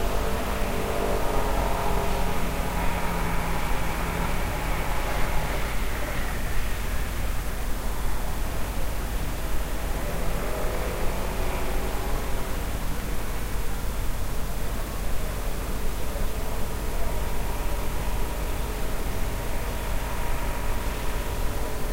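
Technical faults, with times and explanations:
3.25–4.25 s, 5.0–5.5 s, 12.75–13.25 s and 17.5–18.25 s, chunks out of order: a 250 ms block of audio plays late, after the blocks meant to follow it (three blocks late first, then one, one and two). Nothing is missing, but the jumbled sequence and three hard joins per event produce garbled moments.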